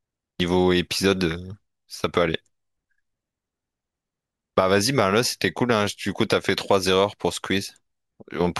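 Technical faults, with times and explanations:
No technical faults can be heard in this speech clip. Nothing in the signal calls for a time or an explanation.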